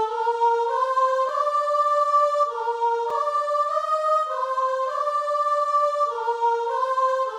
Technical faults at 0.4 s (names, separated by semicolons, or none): none